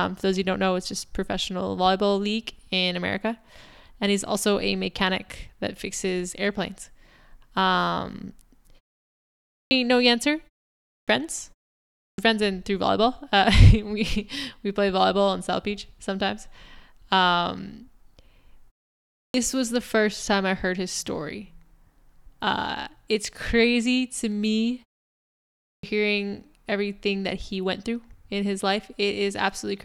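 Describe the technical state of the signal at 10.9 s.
Sound bursts abruptly out of silence with its opening missing: a clipped start after a pause, 10.73–11.08 s, where the output device, asleep after a 0.32 s pause, swallowed about 0.35 s while waking.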